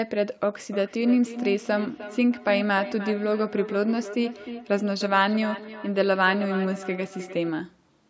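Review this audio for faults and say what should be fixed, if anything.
From 0.6 s to 7.55 s there is feedback echo between two devices. The speech comes round again roughly every 300 ms. Each repeat is thinner and more ringing. The loudest is about 12 dB below the direct speech. One device plays what the other's microphone sent. That microphone picks it up again, and neither echo canceller removes the other device's output. To prevent it, keep only one device's microphone and speaker active in the room, or use headphones.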